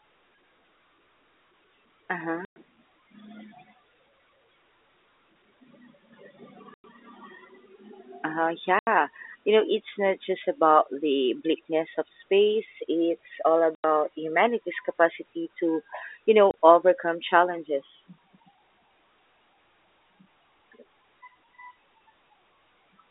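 Packet loss filled with silence cuts this telephone-band speech at 2.45, 6.74, 8.79, 13.75 s (before "humanity's capacity to you") and 16.51 s (before "overcome challenges"). The 110, 100, 80, 90 and 30 ms gaps, all multiples of 10 ms, fit dropped 10 ms packets replaced by silence, leaving hard edges.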